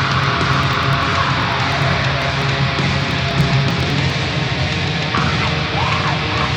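From 0.14 s to 4.10 s the audio carries periodic USB or driver dropouts: around forty short ticks spaced every 0.099 s, each where roughly a millisecond of signal is skipped outright. The even spacing points to a recurring background task stalling the audio path.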